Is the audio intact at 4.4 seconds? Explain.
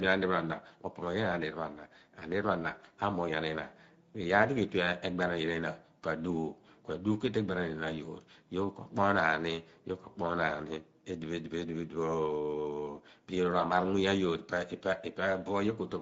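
No. At 4.4 seconds the speech carries Speex codec damage, which runs through the whole clip. Too few bits go to the excitation signal, so the voice sounds noisy and hoarse, plainly audible, and this fits a middling Speex setting around 16.8 kbps.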